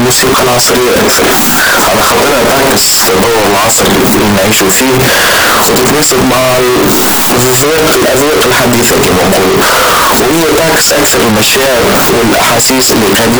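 Signed and unsigned mixed up, from the start of the speech to the end: the whole recording sounds like a wall of harsh, clipped distortion, with quiet moments as loud as the rest. The likely cause is 16-bit samples read with the wrong sign convention, so the top bit is flipped. Every small swing through zero then lands at the opposite extreme, and each zero crossing becomes a full-range jump, producing this constant, grinding loudness.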